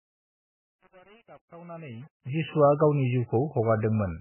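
Across the whole clip the speech has the sound of MP3 compression. The damage is heavy. Nothing is left above 3 kHz, so the treble is simply gone. Weak frequency lines drop in and out between frames, which gives the speech a watery, swirling texture. S sounds and attacks lose their edges. This is likely a low-bitrate MP3 encode, and the degree of damage fits a very tight rate of about 8 kbps.

From 2.22 to 2.25 s there is pre-echo. A sharp attack lands late in a transform block. The codec spreads that block's quantisation noise evenly, so noise sized for the loud onset also fills the quiet gap before it. A short hiss runs ahead of the attack for about 34 ms. The onset itself sounds softened and smeared rather than crisp.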